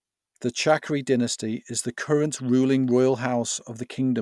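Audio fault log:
No fault is heard anywhere in this speech recording. There is nothing to log for any point in the clip.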